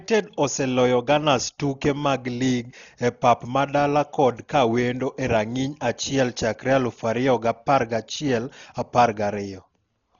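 Speech, dull throughout with nothing above 6.9 kHz and rough, fluttering noise around voiced tones: heavy damage, likely Dolby Digital compression at a bitrate near 32 kbps.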